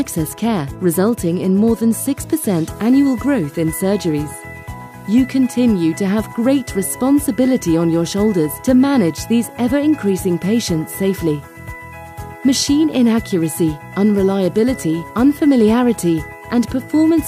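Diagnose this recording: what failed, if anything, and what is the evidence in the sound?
Nothing stood out on listening that would point to a failure anywhere in the recording or playback chain.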